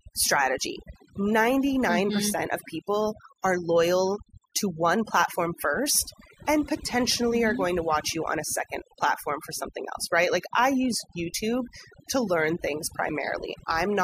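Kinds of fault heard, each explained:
Overdone noise removal: a noise reducer was pushed too hard across the whole of this speech recording, cutting any frequency band that sits close to its noise estimate, so the background noise collapses to near silence dotted with twinkling specks while softer parts of the voice vanish too. A spectrogram shows a black background sprinkled with isolated bright dots and speech harmonics with gaps; the waveform shows flat, near-empty pauses.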